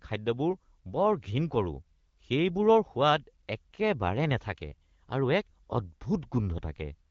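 No technical faults can be heard in the speech. It carries the band-limited sound of the AMR wideband (HD Voice) codec, with only light coding texture and a clear voice, which fits a rate of around 12.65 kbit/s.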